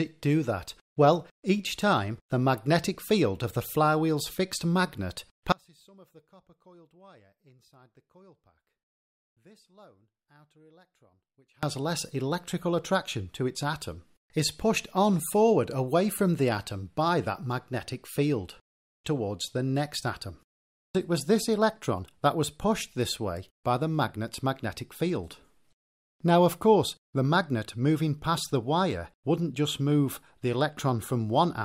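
At 5.52 s the sound drops out abruptly and stays gone until 11.63 s, an audio dropout to a faint residue lasting about 6.1 s. The gap isn't silent: a faint sound remains, roughly 30 dB below the signal's normal level. The likely cause is a break in the wanted signal while the path after it stayed live. Unlike a pause or fade, both edges are sudden, and the residue continues underneath.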